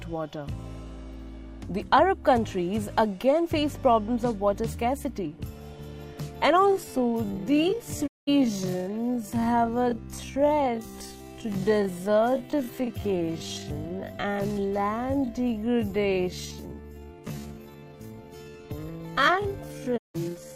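From 6.62 s to the end, the pace abruptly drops to about 0.53 times normal speed while pitch holds, so it drags, likely a time-stretched section. Two digital broadcast dropouts follow, at 8.06 to 8.29 s and 19.96 to 20.16 s. Each fades to silence in 20 ms, which fits several corrupted frames muted by the receiver.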